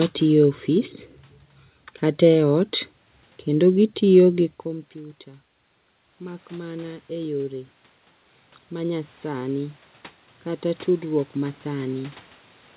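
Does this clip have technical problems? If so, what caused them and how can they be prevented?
Yes. From 6.18 to 7.8 s there is automatic gain rising. The input level fell by about 18 dB, and the gain control answered by gradually raising its gain about 5 dB over that second and a half, so the voice and the room noise swell up together. That shared rise is what sets it apart from the talker moving at about four and a half seconds, where only the voice changes level. Keeping the input level steady, or slowing the gain control, prevents it.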